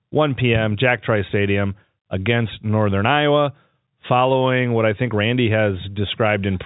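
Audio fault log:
No faults heard in this speech recording.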